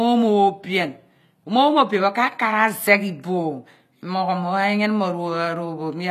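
A speech clip in which the sibilants come out gritty and lisping, with a metallic sheen on the top end that never quite matches the body of the voice beneath it, and nothing at all above 15 kHz. The likely cause is HE-AAC compression at a low bitrate, with the sound pointing to something around 24 kbps. That codec rebuilds the treble from copied lower bands, so the upper harmonics drift out of step with the real ones, and the damage is plainly audible throughout.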